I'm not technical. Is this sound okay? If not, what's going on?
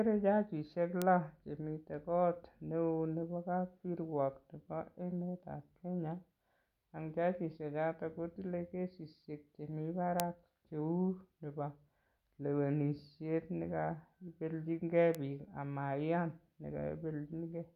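No. There are three bit error spikes: single sharp ticks at 1.02 s, at 10.20 s just after "jajishechoto kotile kesishek chemi" (the loudest), and at 15.15 s between "lewenishet nekaipelchinkei" and "biik amaiyan". One stored digit got corrupted for an instant. Unlike a microphone pop, each tick has no link to the speech.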